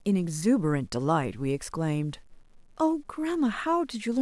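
Throughout the speech a grainy, gritty distortion rides along with the signal, roughest in quiet passages and decaying syllable tails, with noise about 40 dB below the level. Likely cause: low bit depth without dither, rounding to roughly 9 bits.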